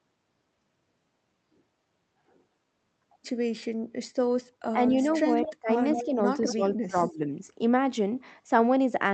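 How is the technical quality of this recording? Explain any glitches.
The recording has two recurring glitches in its second half: the speech dips or is cut back in places, and a faint delayed copy of the voice comes through.

Speech suppressed in double talk: from 4.72 to 4.92 s the speech sinks slightly, by roughly 5 dB, for a small part of that span. From 5.59 to 7.2 s it drops much harder, by about 25 dB at its deepest, in dips adding up to about half a second. The likely cause is an echo canceller that, with both sides talking at once, could not tell the near talker from loudspeaker echo and attenuated everything.

Echo leak: a delayed copy of the voice appears from 5.15 to 5.54 s, roughly 15 dB below the speech and trailing it by 231 ms. Two stronger scraps follow at 5.94 to 6.03 s and 6.47 to 6.76 s, both lagging by 208 ms and around 10 dB down. These likely come from a far end using a loudspeaker whose echo canceller did not fully remove what its microphone picked up, so part of the signal returned.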